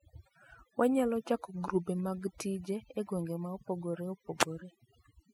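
Overdone noise removal runs the whole way through this speech: bands near the noise floor get switched off, leaving twinkling specks in near silence.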